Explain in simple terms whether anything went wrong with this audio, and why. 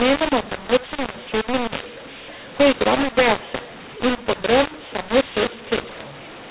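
The telephone audio was packed using the mu-law version of G.711 but unpacked as A-law, so mu-law and A-law were mixed up for the whole clip. Loudness gets scrambled, making the speech harsh and distorted, and the quiet gaps fill with noise.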